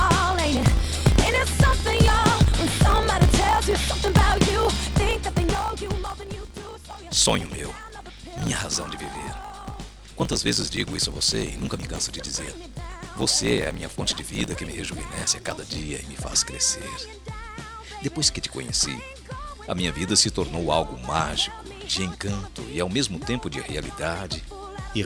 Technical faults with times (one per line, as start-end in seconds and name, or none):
0.00-15.79 block size mismatch (truncated)